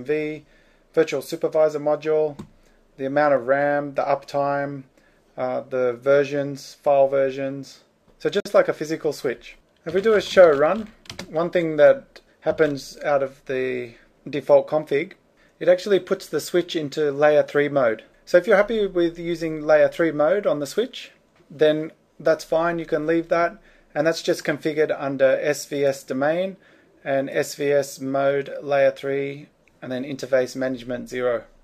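The audio has one fault: a gap at a join of encoded pieces. At 8.40 to 8.45 s a gap of about 52 ms opens in the sound, then it resumes where it stopped. The edges are smeared, so the silent part is shorter than the gap. Two separately encoded sections were joined without trimming the encoder delay and end padding.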